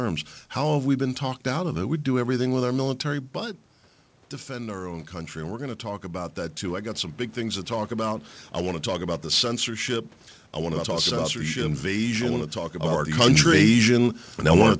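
From 4.47 to 7.21 s, automatic gain rising lifts the level by about 4 dB after the input fell by about 11 dB. Unlike a talker moving closer, the room noise swells together with the speech, gradually over nearly three seconds.

At 10.72 s a doubled audio track starts abruptly and lasts to the end. A full-band copy of the speech follows about one and a half seconds behind, roughly 5 dB quieter. It has no decay or room colour, so it is not a room echo. The likely cause is a second, slower capture path.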